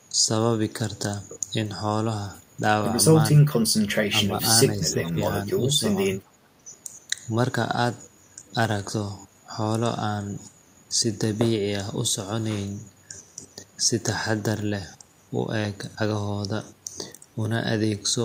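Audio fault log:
4.30–6.67 s, speech suppressed in double talk: speech dips at 4.30–4.43, 4.68–5.20, 5.78–5.83, 6.22–6.27 and 6.57–6.67 s, by up to about 15 dB, likely an echo canceller ducking both sides during overlapping talk.
5.05–5.09 s, echo leak: a brief, faint copy of the speech about 25 dB down and 408 ms late, likely loudspeaker pickup the far-end canceller failed to remove.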